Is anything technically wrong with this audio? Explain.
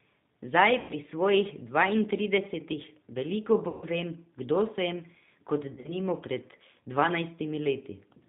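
Yes, the speech carries two faults.

G.729 codec, throughout: the band stops at 4 kHz, and the damage is plainly audible, consistent with G.729A at 8 kbit/s. The decoder rebuilds each 10 ms frame from a vocal tract filter, a pitch predictor and a handful of pulses rather than the actual waveform. The result is speech that stays intelligible but sounds muffled, slightly rough and synthetic, with the top end missing.

VoIP packet loss concealed by the speech codec, at 0.80–0.94 s (just before "svojih dvaintridesetih veliko"), 3.68–3.85 s (between "svojih dvaintridesetih veliko" and "vem kdo sem kot"), and 5.74–5.96 s (after "vem kdo sem kot"). When packets went missing, the decoder filled the gaps by extrapolating from its last pitch and filter settings while lowering the gain. The first two gaps suggest roughly 90 ms and 140 ms of lost audio. The third points to about 80 ms lost in scattered bursts over 100 ms, the longest about 40 ms. 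Each gap sounds like a stretched, buzzy tone or coloured noise that fades, and the voice stays weak or distorted briefly afterwards.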